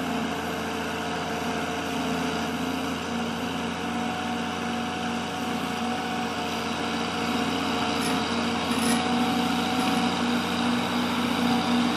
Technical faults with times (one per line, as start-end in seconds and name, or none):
none